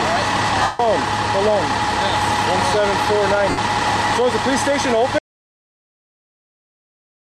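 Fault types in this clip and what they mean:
Lost LE Audio frames: Two stretches of the Bluetooth LE Audio stream went missing, and the LC3 decoder filled each gap by replaying its last spectrum with scrambled signs and fading it. The longer one runs from about 0.62 to 0.80 s, roughly 0.17 s, and you hear the sound smear into a noisy wash that sags toward quiet. The shorter one, around 3.50 to 3.58 s, is only about 0.08 s, a brief fuzzy blur.
Audio dropout to silence: At about 5.19 s the audio cuts out to dead digital silence and stays that way to the end of the clip, with no room tone or hiss underneath, so anything after that point is simply gone. The likely cause is the input getting lost, maybe a device disconnecting, a link failing or a mute being hit, while the recorder kept writing silence.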